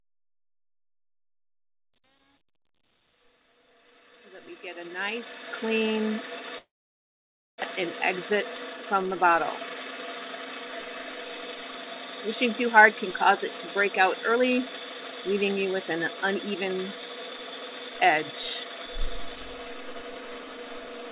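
The audio opens with a fade-in that reaches full level at 5.71 s, and the quiet part of that fade shows truncation distortion on a fade from 0.0 to 5.71 s, worst up to 5.08 s. The gain stage kept only about 10 bits and added no dither, so the faint opening sounds gritty. On a waveform, the low-level section looks like coarse square steps instead of a smooth curve. On a spectrogram, it shows as broadband grainy speckle. From 6.58 to 7.64 s there is what is likely a long network dropout. The receiver carries the last sound forward as a fading buzz or hiss over the first part of the gap, and then there is near silence for roughly 0.9 s. About 600 ms of audio never arrives. The waveform shows a decaying tail into a flat line, and the spectrogram goes from smeared, repeated texture to an empty band. The audio resumes without the lost section, and the playout delay shifts by roughly 0.4 s. Four jitter buffer speed-up passes follow, where the buffer trims pitch-period slices to work off excess delay. 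The first, at 8.93–9.36 s, plays about 131% fast with around 150 ms removed. The second, at 12.65–13.44 s, runs about 105% fast with roughly 40 ms removed. The third, at 14.29–14.59 s, runs about 129% fast with about 100 ms removed. The fourth, at 15.30–16.73 s, runs about 105% fast with about 100 ms removed. Throughout each of these passes the pitch stays the same, but the sound is hurried, most clearly in the two faster passes. A spectrogram shows events compressed in time with unchanged harmonic spacing. The call-path codec sound fits G.711 A-law at 64 kbps, with nothing above 4 kHz.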